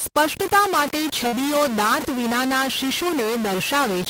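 From the start, the speech carries a distortion that never lets up. It sits on every sound, and the pauses fill with noise instead of going quiet. The likely cause is a stuck bit: one bit of each sample held at a fixed value. Roughly half the samples then land off by that bit's weight. The error follows the waveform, so it rides with the speech and hisses in silence.

At 1.27 s, just after "સ્પષ્ટતા માટે", there is a burst of packet loss lasting until 1.35 s. Several packets in a row failed to arrive in time. The receiver covered the hole by carrying on the last sound for about 50 ms and turning it down as it went. That fill is heard as a brief held, fading sound. Speech then picks up further on, with about 60 ms of it gone.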